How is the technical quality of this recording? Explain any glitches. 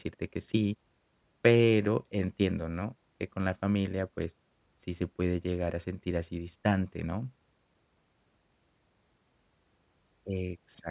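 Nothing technical stood out on listening to this speech recording, so there are no glitches to explain.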